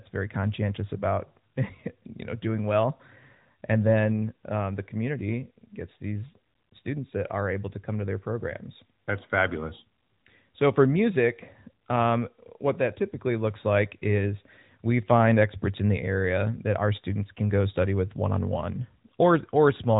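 No technical faults are audible.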